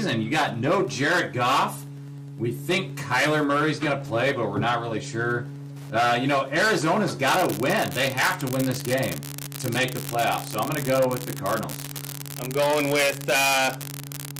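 There's a faint, steady ticking running under the whole clip, about ten ticks a second, which is classic Wi-Fi interference. A Wi-Fi radio sitting too close to the audio circuitry is sending its beacon every 102.4 ms, and the circuit rectifies each burst into a click. It's low, roughly 35 dB under the sound. From 7.28 s right through to the end at 14.39 s, a second problem kicks in: an unreliable data bit. One data line is marginal, so that bit comes out wrong in a random scattering of samples. Because it's always the same bit, every error is a spike of identical size, around -8 dBFS. That adds up to a constant crackly fizz that doesn't follow the sound at all and carries straight on through the quieter stretches.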